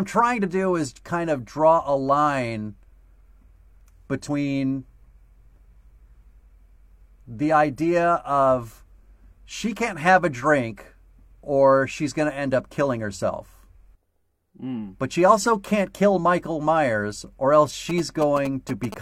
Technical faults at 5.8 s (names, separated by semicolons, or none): none